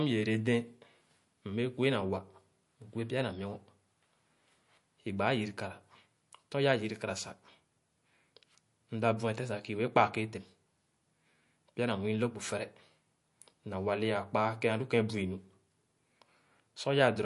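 From start to finish the speech carries plainly audible MP3 compression, likely from a low bitrate around 48 kbps. Nothing survives above 11.3 kHz, so sibilants sound dull, and weak detail flickers in and out between frames, giving a watery, swirly edge.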